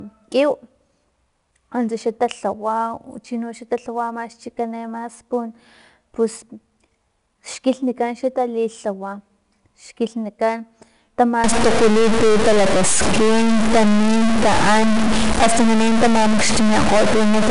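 Throughout, 4-bit ADPCM compression adds gritty hiss that tracks loudness, unlike steady background noise, with nothing above 10.6 kHz, which fits about 89 kbps. From 11.44 s to the end, distortion appears and pauses fill with noise, likely a stuck bit; clipping would leave the silences clean.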